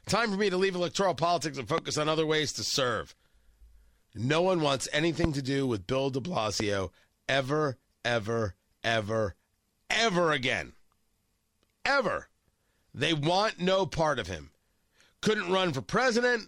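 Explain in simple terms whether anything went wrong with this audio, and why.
Three loud pops break into the speech, at 1.78 to 1.80 s, 5.24 to 5.27 s and 6.60 to 6.62 s. Each is a single sharp click. The first is the loudest. The speech continues underneath. A sudden electrical jolt, likely from a plug, switch or static, caused them.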